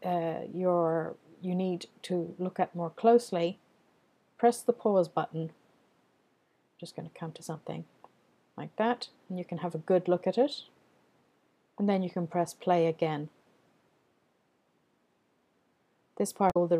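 Damaged data in a compressed stream at 16.47 to 16.57 s: corrupted frames make the decoder lose sync and hunt for the next header, leaving a brief glitch near the audio's end.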